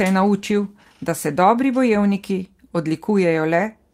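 No faults are audible in this speech recording, which runs without any dropout, glitch, distortion or timing error.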